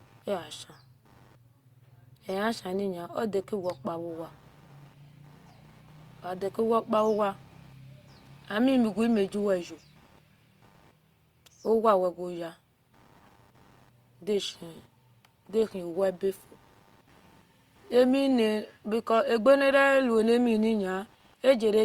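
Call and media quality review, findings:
Computer activity noise throughout: buzzy chirping near 100 Hz pulses, about 35 dB below speech. Tracks CPU/GPU/mouse load through shared audio ground, unlike steady mains hum.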